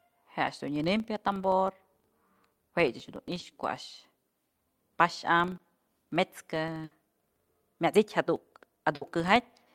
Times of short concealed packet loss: 3.39-3.43, 5.57-5.61

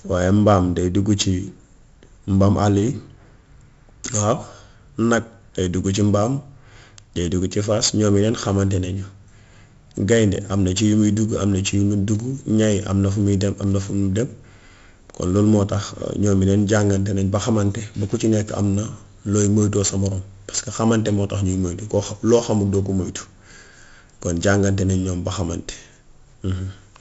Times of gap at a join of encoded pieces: none

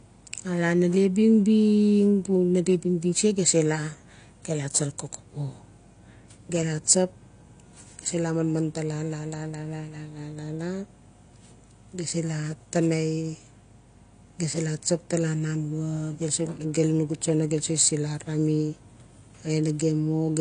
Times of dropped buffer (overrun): none

